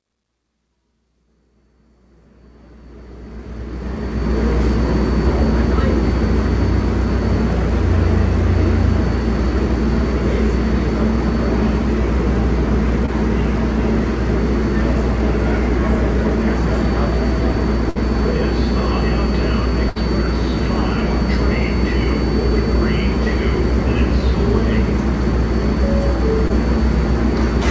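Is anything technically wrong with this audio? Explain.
Yes. The sound passed through a call path that keeps nothing above 8 kHz, consistent with G.722 at 64 kbps. Two kinds of fault are audible.

Short concealed packet loss occurs at 13.06–13.10 s and 26.48–26.51 s. Each is a brief smear where the sound momentarily wobbles. About 20 ms of audio failed to reach the decoder in time, and the receiver filled the gap by extending the preceding sound, pitched or as shaped noise, for roughly 16–19 ms before blending back into the real signal.

A burst of packet loss occurs at 17.90–17.97 s and 19.89–19.98 s. Here the sound briefly freezes into a held buzz or a fading hiss, then jumps ahead. About 60 ms went missing each time, which points to several consecutive packets arriving too late or not at all. The receiver continued the last sound for around 60 ms while lowering its level, so the material in between is lost.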